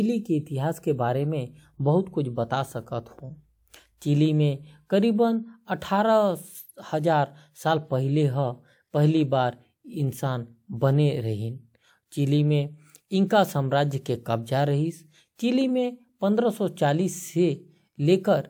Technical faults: none

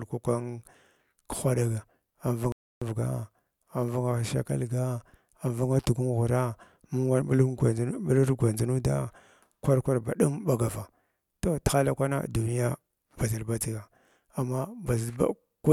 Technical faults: playback stall

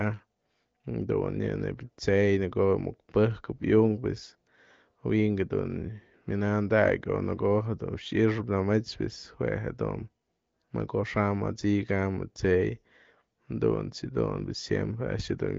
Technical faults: none

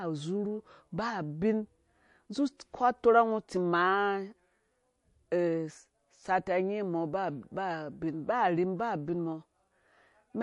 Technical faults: MP3 compression; pre-echo

